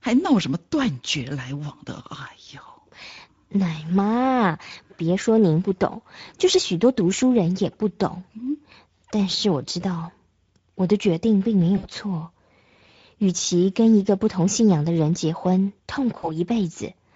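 Speech coded with the Speex codec throughout has plainly audible hoarse, noisy CELP texture, consistent with a bitrate near 16.8 kbps, and the spectrogram shows smeared harmonics with noise-like upper bands. VoIP packet loss concealed by the speech codec occurs at 11.77–11.87 s and 16.17–16.41 s. Each gap fits about three lost 20 ms frames, which the decoder filled with a fading extrapolation that appears as a repeated, decaying waveform.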